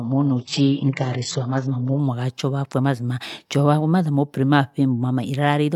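Speech, muffled and artefact-heavy until 2.0 s with nothing above 8 kHz, then suddenly clear without a gap: an adaptive stream starting at a low bitrate before stepping up.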